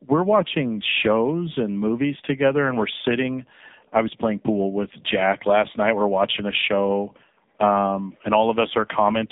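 Tandem speech coding affects this whole speech clip: it was decoded and re-encoded at network borders, passing through two low-rate speech coders in a row, consistent with AMR-NB on either side of a G.711 link. The compounded damage leaves it rough, muffled and warbly, with nothing above 3.7 kHz.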